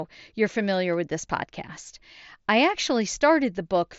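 No technical faults turn up anywhere in the speech, which comes through a Bluetooth mSBC headset link with its band ending near 7.7 kHz, as that wideband headset codec allows.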